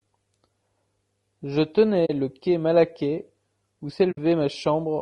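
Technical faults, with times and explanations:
Throughout: low-delay AAC compression. The speech sounds rough and grainy, with noise filling the gaps between harmonics and a thin, synthetic-sounding top band. This is likely AAC-ELD at a low bitrate, perhaps near 32 kbps. On a spectrogram, harmonics look smeared and the upper band looks patchy.
2.05–2.10 s and 4.11–4.18 s: AAC frame loss with muting. The sound fades out and back in, leaving soft-edged holes. The decoder zeroed the missing spectrum, which fits two and three lost frames of about 20 ms. A waveform shows tapered dropouts, and a spectrogram shows blank vertical gaps.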